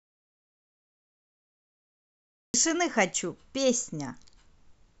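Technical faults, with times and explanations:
0.00 to 2.54 s, audio dropout to silence: the clip opens already in the gap, with silence and no room tone, and the speech arrives abruptly at 2.54 s as if mid-flow. That total absence of background points to lost input rather than a quiet room, likely a disconnected device, failed link or accidental mute, with the recorder writing silence until the signal returned. Whatever was spoken during those two and a half seconds is not recoverable.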